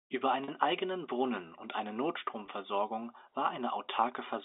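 At 0.44 to 0.48 s and 2.46 to 2.48 s, packet loss with pitch repetition bridges 40 ms and 20 ms gaps, fitting two and one 20 ms packets, with a brief held, buzzy tone rather than the silent hole of a plain dropout.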